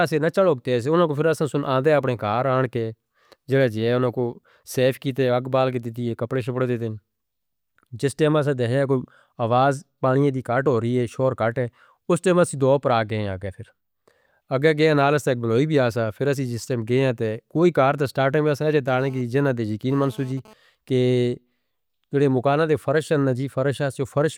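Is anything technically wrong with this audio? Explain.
Yes, there's GSM phone buzz from 18.88 to 20.54 s, just after "ایمیا سے ہیں جی". A nearby 2G phone transferring data was bursting about 217 times a second, and the audio circuit rectified those pulses, giving a raspy, harmonic-rich buzz that comes and goes, sitting about 26 dB below the speech.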